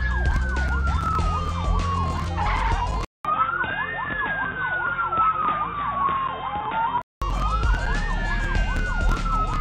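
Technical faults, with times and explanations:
3.05 to 7.22 s, input switched to a poorer device: after a gap of about 200 ms the sound turns dull and boxy, with nothing above 3.8 kHz, and a faint new background noise appears, roughly 45 dB below the signal, while loudness stays about the same. At 7.22 s the full, clear band returns. The likely cause is the system changing its input mid-recording to another microphone or a headset's call profile, whose narrower band and own noise replace the original.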